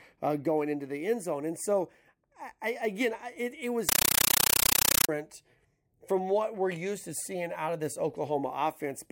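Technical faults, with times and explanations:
3.89–5.09 s, compressed stream played as audio: the speech gives way to harsh, very loud chattering static. A Dolby Digital (AC-3) stream is being sent out as raw samples without decoding, so each frame plays as a 9.33 ms noise burst followed by silence, 31.25 times a second.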